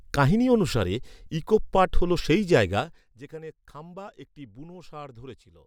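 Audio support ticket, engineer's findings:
Zipper noise, 2.76–3.16 s, between "পাট’ হল সেই" and "যেখানে খাম্বা একটি": gain stage drops level about 20 dB in unsmoothed 2 dB steps, roughly 30 per second, each ticking.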